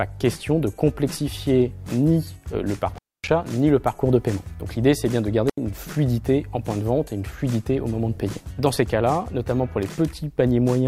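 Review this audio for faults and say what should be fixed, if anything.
Two intermittent contact dropouts occur, at 2.94 to 3.28 s and at 5.49 to 5.58 s. A loose cable or plug briefly opened the signal path. The sound cut out for about 250 ms, then about 80 ms, with crackle at each edge. Reseat or replace the suspect cable and connectors before recording.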